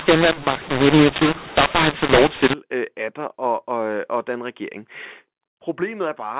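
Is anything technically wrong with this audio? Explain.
Yes. From the start to about 2.54 s the speech shows a mu-law and A-law mix-up. The audio was encoded with the G.711 mu-law curve but decoded as A-law, so each 8-bit code maps to the wrong level on the other logarithmic scale. Loud and soft parts come out scrambled in size, giving a harsh, gritty distortion, and the quiet gaps are lifted into an audible noise floor instead of silence. After that point the clip carries ordinary mu-law telephone audio limited to 4 kHz.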